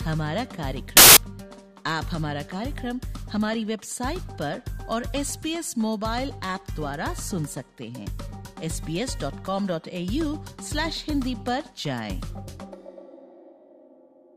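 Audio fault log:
0.97–1.17 s, samples built from the wrong bytes: for about 0.2 s the bytes of each sample are assembled wrongly, so fast-changing low bits dominate and a burst of loud broadband noise results, showing as dense waveform hash and a flat, broadband spectrogram smear.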